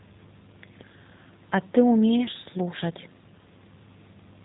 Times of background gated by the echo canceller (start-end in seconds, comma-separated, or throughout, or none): none